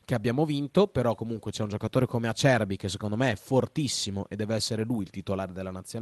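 No technical faults can be heard in this speech.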